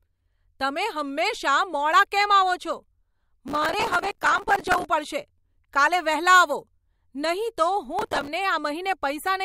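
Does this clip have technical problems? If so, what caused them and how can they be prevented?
Yes. Processor overload crackle occurs from 3.48 to 4.85 s, just before "પડશે કાલે વહેલા આવો", and from 7.99 to 8.28 s. Missed audio deadlines repeat stale fragments, which fits buffers of around 5 ms. Use larger buffers or reduce processing load.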